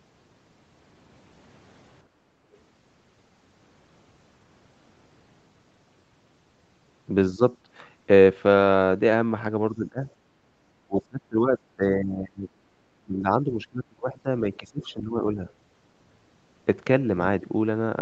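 A speech recording made through a call's microphone processing, with nothing above 8 kHz. From 2.07 to 2.48 s the room sound is background gated by the echo canceller. The canceller heard the loudspeaker and pulled the microphone down hard, by about 8 dB. The background sinks for under half a second, then comes back as the canceller releases.

The talker's voice then dips. This happens at 7.33 to 7.42 s, 9.72 to 10.09 s, 10.87 to 11.55 s, 11.76 to 12.75 s and 13.05 to 15.43 s. The first dip is shallow, around 10 dB. Later ones cut far deeper, roughly 20 to 25 dB. The last lasts about two seconds. This is likely speech suppressed in double talk. Both sides spoke at once, and the canceller could not tell the talker from the echo. So it turned the talker down too.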